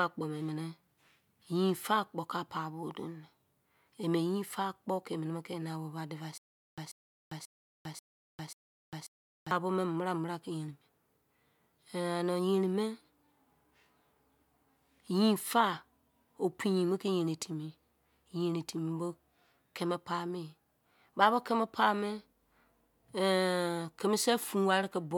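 Likely a stalled stream replaying its last fragment on each retry: from 6.38 to 9.51 s, a stutter with silent gaps repeats a 138 ms burst five times, separated by 400 ms of digital silence.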